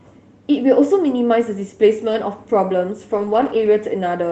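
At 2.09 to 2.15 s, and again across 3.17 to 3.67 s, comes a lost packet rebuilt from error correction. Each missing packet was replaced by the low-bitrate copy carried in the next Opus packet, so nothing drops out. The sound turns briefly rougher and noisier instead, about 40 ms the first time (which fits two packets) and about 260 ms of scattered patches in the second stretch. On a spectrogram those frames show smeared, grainier harmonics, while the waveform stays continuous.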